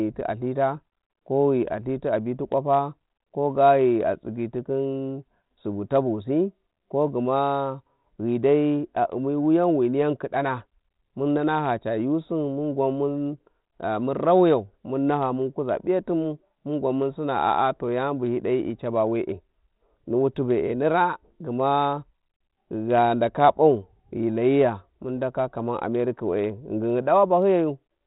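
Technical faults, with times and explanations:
0.23–27.95 s, clock slip clicks: faint, evenly spaced ticks about every third of a second, likely from two unsynchronised clocks roughly 100 ppm apart slipping single samples.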